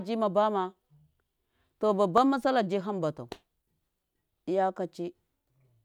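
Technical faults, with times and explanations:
2.18 s, repeated buffer. New audio reached the device too late, so it played its last buffer once more. The repeated piece is only about 1.5 ms long, which fits a 64-sample buffer. A piece that short cannot be heard as a stutter. Instead the hard joins at each end of the repeat make a single brief click in the speech. Roughly a millisecond and a half of the real signal is lost to the repeat.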